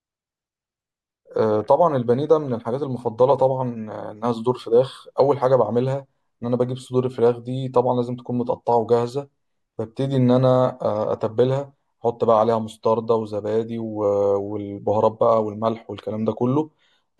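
No technical faults are audible.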